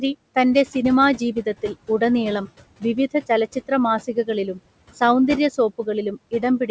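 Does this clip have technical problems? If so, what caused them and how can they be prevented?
Yes. Noise suppressor artifacts run throughout: the suppressor cuts the steady room noise, which sits about 19 dB below the speech, by about 20 dB frame by frame. That makes the noise sink between the words and rise under them. A quieter room or gentler suppression settings would prevent this.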